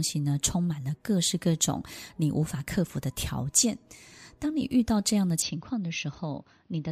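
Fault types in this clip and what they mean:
Input switched to a poorer device: at about 5.42 s the speech suddenly goes duller and a bit boxier and stays that way to the end, with nothing above 6.3 kHz. There's no gap at the changeover, the level drops by a few decibels, and a faint new noise floor sits well below the voice. That's most likely the recording jumping to a lesser mic or a headset's call profile mid-take.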